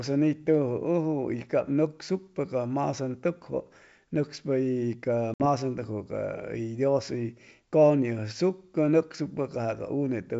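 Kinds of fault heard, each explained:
Packet loss on an ADPCM call: at 5.34 s a few packets drop out, leaving a sharp-edged 60 ms silent gap in the G.722 speech; the decoder's adaptive predictor and step size lose track of the sender's, so the audio comes back briefly off until they resync.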